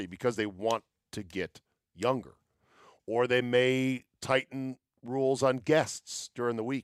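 Listening closely to the speech, nothing stood out as a technical problem at any point.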